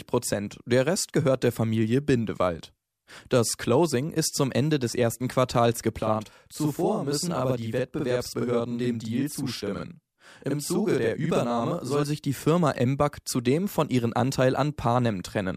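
From about 6.03 s to 12.03 s there's a channel delay, and it shows up as doubling. One side of the stereo pair is arriving roughly 46 ms late, which fits a 2048-sample buffer, and once everything's folded to mono you get the original plus a second copy at the same level trailing just behind it. So the sound takes on a slappy, doubled edge, like a tight single echo, until it snaps back to normal at 12.03 s.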